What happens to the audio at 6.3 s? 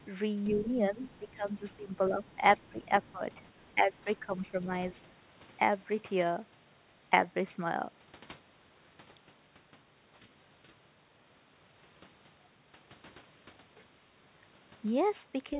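Nothing goes wrong at 6.3 s; the speech carries on intact through that moment, with only the steady telephone-band sound of the call path, which has nothing above 4 kHz and fits a G.711 mu-law link at 64 kbps.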